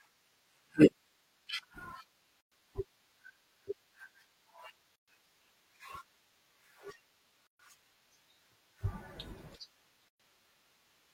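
Gaps at joins of encoded pieces fall at 2.41, 4.96, 7.47 and 10.09 s, 110 to 125 ms silences in continuous speech. Separately encoded segments were spliced untrimmed, leaving start delay and last-frame padding in. Edges are smeared, and speech resumes where it stopped.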